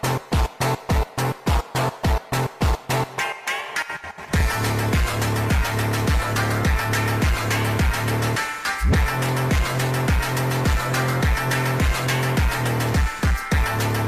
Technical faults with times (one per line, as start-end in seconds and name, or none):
none